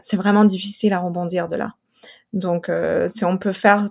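Nothing goes wrong in this bit of speech, so there's no technical fault to point to anywhere along the way.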